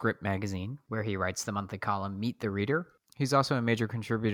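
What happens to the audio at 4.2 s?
Nothing goes wrong at 4.2 s; the audio plays through that moment intact, with no dropout, click or distortion.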